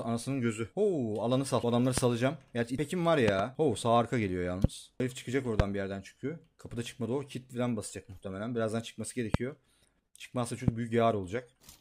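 Loud pops strike at 1.98–2.00 s, 4.64–4.67 s, 5.60–5.62 s, 9.34–9.37 s and 10.68–10.70 s, with a double pop at 3.28–3.42 s. Each is a sharp thump standing roughly 20 dB above the audio, most likely from a voltage step such as a plug, switch, static discharge or driver glitch. Unlike a dropout or splice click, the sound continues unbroken beneath each pop.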